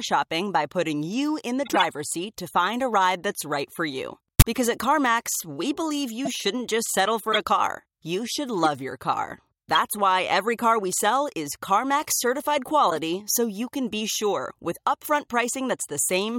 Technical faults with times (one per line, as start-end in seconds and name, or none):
1.65-1.81 corrupt frame decoded
4.39-4.44 corrupt frame decoded
6.25-6.28 corrupt frame decoded
7.32-7.37 corrupt frame decoded
12.90-12.98 corrupt frame decoded